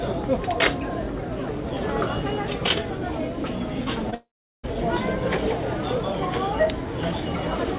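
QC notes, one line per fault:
4.10–4.14 s, short concealed packet loss: about 20 ms of audio did not reach the decoder in time. The receiver extended the preceding sound for roughly 22 ms, then blended back, leaving a brief smear or wobble in the band-limited call audio, which has nothing above 4 kHz.
4.14–4.65 s, long network dropout: the sound becomes a fading continuation of what preceded it, then falls to about 0.39 s of silence. It resumes at 4.65 s with about 0.5 s of material gone. Likely cause is packets ceasing to arrive over the call link.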